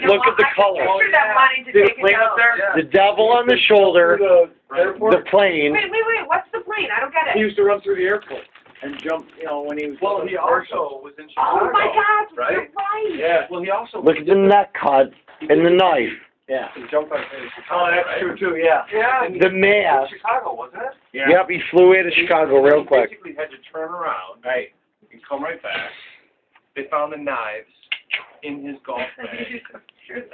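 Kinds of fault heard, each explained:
Resampler restarted on every block: from 8.0 to 9.9 s the sound carries a steady tick at 10 per second. This fits a sample-rate converter, pointing to 44.1 kHz down to 16 kHz, that is reset every 100 ms and so filters each block's edges without the real neighbouring samples. On the waveform, small steps or glitches repeat at 100 ms spacing. A spectrogram shows thin broadband vertical lines at the same interval, present only where signal is.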